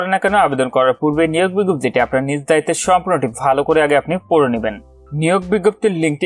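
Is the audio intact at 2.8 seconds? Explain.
Yes, at 2.8 seconds the audio is intact, with no dropout, click, distortion or other fault.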